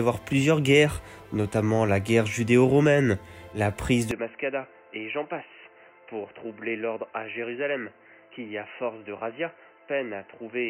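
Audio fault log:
4.11 s to end, input switched to a poorer device: with no gap, the sound abruptly turns dull and boxy, nothing above 3 kHz survives, the level drops by roughly 10 dB, and a new noise floor appears, well below the signal. This likely comes from the input moving to a narrower-band microphone or headset call profile.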